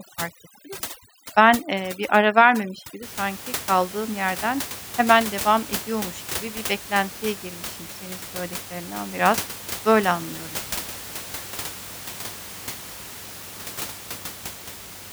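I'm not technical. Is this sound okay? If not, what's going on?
No. For the first 3 seconds, from 0 to about 3.03 s, the speech suffers from overdone noise removal. A noise-cleaning step was set too aggressively, so it shuts off small slices of the sound it mistakes for background hiss, and quieter parts of the voice get cut along with them. The background drops and breaks up into twinkling specks. It clears up by "sanki kaldığım yerden hemen", after which the ordinary room noise is audible beneath the voice.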